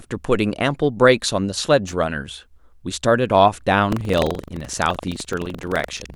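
A speech recording with two faults. A worn contact making and breaking briefly at 1.87 to 1.93 s causes loose connector crackle, a short irregular burst of crackle. From 3.88 s to the end, the writer and reader of the playback ring buffer have slipped, so about a tenth of each buffer holds audio roughly a tenth of a second old. This buffer tearing produces a robotic 23.4 Hz rattle under the voice, which fits a 2048-sample buffer.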